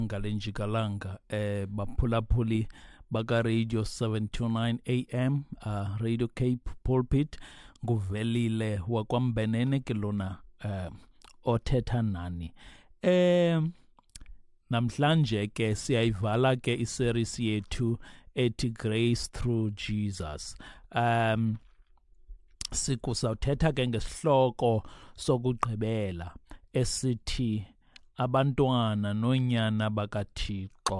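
Nothing in the audio stood out as a technical problem on listening.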